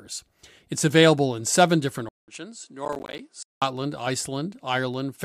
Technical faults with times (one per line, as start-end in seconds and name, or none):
2.09-3.62 input switched to a poorer device
2.85-3.19 processor overload crackle